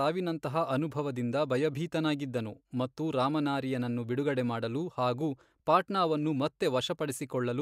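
The speech recording has no audible technical faults at any point.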